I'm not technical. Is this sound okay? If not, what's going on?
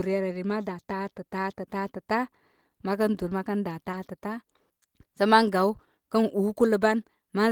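No. At about 3.91 to 3.95 s there's a brief smear or wobble: short concealed packet loss, where a moment of audio arrived too late and the receiver filled the gap.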